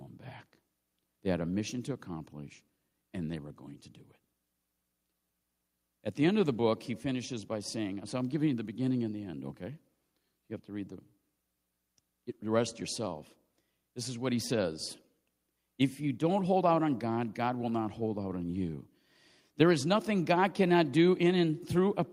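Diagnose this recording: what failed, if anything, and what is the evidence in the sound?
Nothing in the signal chain of this speech recording has failed: the level, continuity and timing of the audio hold steady throughout, with no dropouts, clicks, distortion or timing disturbances at any stage.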